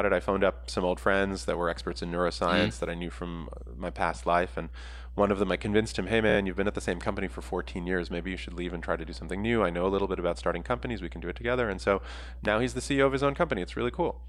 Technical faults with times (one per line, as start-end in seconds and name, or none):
0.00-14.28 mains hum
6.29-6.36 repeated frames